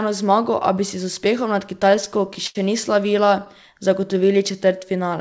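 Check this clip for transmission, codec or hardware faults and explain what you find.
Yes, there are faults. The speech has two stretches of repeated stalls (stutter) and one jitter buffer slow-down. The band stops at about 7 kHz, which fits a wideband call codec such as G.722.

Repeated stalls (stutter) occur from 1.80 to 2.57 s, right after "si z uspehom nad", and again from 3.07 to 3.48 s. Packets arrived late, and the jitter buffer kept running dry. Each time, the receiver stretched the last sound until fresh audio came. The first span has eight stalls, with 150 ms filled in. That is 19% of the span, and the longest stall is 76 ms. The second span has five brief stalls of 10 ms or less, filling 50 ms. Nothing is lost, but the speech catches and drags.

A jitter buffer slow-down runs from 3.78 to 5.09 s. The buffer was low or had just raised its target delay, so the receiver built a reserve. 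It did this by repeating single pitch periods and bits of pauses. This added 126 ms, and the speech plays at about 91% speed. The pitch stays the same. Sounds come out drawn out and slightly slowed.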